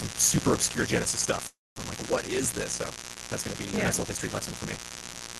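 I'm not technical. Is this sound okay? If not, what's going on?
No, there are three separate problems in this speech recording.

The first is mains buzz, a harsh, raspy hum that runs through the whole clip at a fairly strong level. It comes from the 50 Hz electricity supply leaking into the audio, typically through a light dimmer, a power adapter or a poorly shielded cable. The leak arrives as sharp spikes rather than a smooth hum, which is why it sounds gritty and reaches well above the low hum itself.

The second is a block size mismatch (truncated). The audio is handled in small chunks, and one stage is producing longer chunks than the next stage accepts, so the end of every chunk is dropped. Each cut adds its own buzz, repeating 50 times a second, and the speech plays about 1.16 times too fast while keeping roughly its normal pitch. The pattern fits chunks of around 1024 samples being cut short.

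The third is a call audio freeze from 1.47 to 1.78 s, a pause of about 0.29 s. The sound stalls, the last bit of audio smears into a brief fading buzz or hiss, and then roughly 0.21 s of silence follows before the speech resumes where it left off. No speech is lost, but a gap has been inserted. This most likely happened because the call's data arrived late and the receiving end ran out of audio to play.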